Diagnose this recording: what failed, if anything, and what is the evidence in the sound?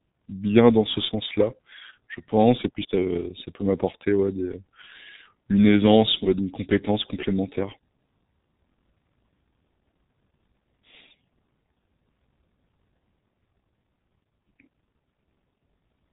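The failure is at the codec stage: G.723.1 codec damage, heavy and present throughout the speech. Nothing is heard above 3.8 kHz, and the sound is muffled and hoarse, with smeared consonants. This fits a coarse low-rate speech model around 6 kbit/s, updated only once per long frame.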